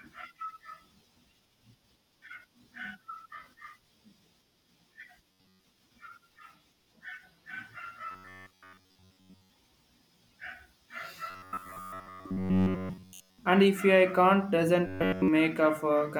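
Robotic sound from repeated short buffers at 5.29–5.64, 8.11–9.50, 11.30–13.38 and 14.87–15.28 s: a rigid 93.8 Hz metallic buzz, likely from starved buffers looping about 10.7 ms of audio. It covers most of the sound in the first two stretches and nearly all of it in the last two. A spectrogram would show evenly spaced harmonic lines at 93.8 Hz intervals, and the waveform would show identical repeating cycles.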